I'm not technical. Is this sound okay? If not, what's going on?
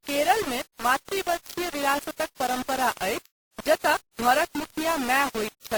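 No. The speech has likely been stored with low bit depth without dither, as if only about four bits were used, so every quiet moment turns rough and grainy throughout.

It was also run through transcoding between lossy codecs, probably Opus and then WMA, so two kinds of compression damage pile up across the whole recording.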